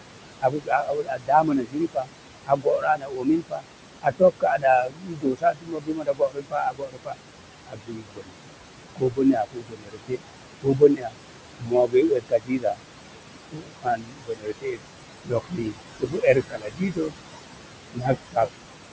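Noise suppressor artifacts run through the whole clip. The suppressor tracks the room noise, which sits about 11 dB below the speech, and lowers each band it judges to be steady noise by about 21 dB, frame by frame. Between phrases the background sinks away, then climbs back under each phrase. The call audio is band-limited and stops at 8 kHz.

Speech cut by the noise suppressor appears in four spans: 0.41 to 8.38 s, 8.96 to 12.81 s, 13.5 to 17.13 s, and 17.93 to 18.47 s. The suppressor mistakes quieter parts of the speech for noise and pulls them down with the background, by as much as about 22 dB. Soft consonants, word endings and quieter stretches come out swallowed or faint. Around five seconds are affected in the first span, about two seconds in each of the next two, and a fraction of a second in the last.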